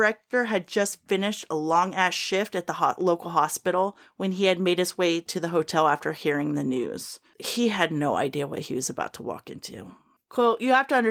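No technical faults can be heard anywhere in the speech recording.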